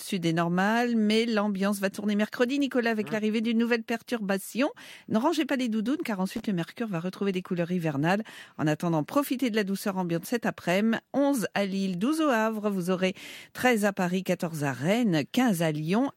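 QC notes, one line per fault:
6.34–6.42 s, loose connector crackle. Right after "pas les doudounes car", a brief irregular scratchy burst. A bad contact chopped the signal on and off.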